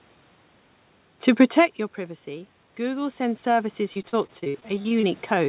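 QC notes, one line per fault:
1.53–5.49 s, automatic gain rising: input dropped about 16 dB as the talker moved back, so gain climbs gradually and voice and room noise swell together.
3.94–5.05 s, repeated packet loss (robotic sound): about a dozen gaps, longest 43 ms, patched by repeating prior sound; about a quarter is concealed, sounding choppy and robotic.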